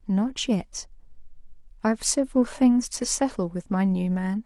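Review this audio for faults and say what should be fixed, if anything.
Nothing needs fixing: the speech signal shows no technical faults, so no correction is called for.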